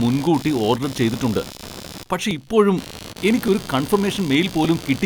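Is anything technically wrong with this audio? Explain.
Yes. There are two faults.

Computer activity noise runs through the whole clip. It is a buzzy, pulsing scratch at around 70 pulses per second, roughly 15 dB below the speech. Load changes in the computer disturb the shared audio ground. The noise follows the machine's activity, not the speech.

Clock drift buffer slips appear as regular clicks from 1.14 s to 4.65 s, just after "മുൻകൂട്ടി ഓർഡർ". There are about four, one every 1.17 s. The likely cause is two devices whose clocks differ by around a tenth of a percent. Each slip drops or repeats a small block of samples.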